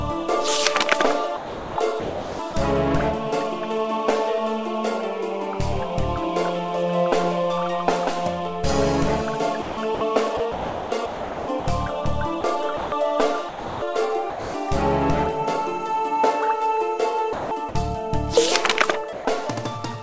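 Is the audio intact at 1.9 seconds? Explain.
No. At 1.9 seconds the audio sits inside a stretch of sound chopped by the voice detector, running from about 1.37 to 2.54 s. The sender likely switched between sending and not sending more than once here. About 810 ms of the real sound was replaced by generated comfort noise. The result is choppy. The sound has two or more holes.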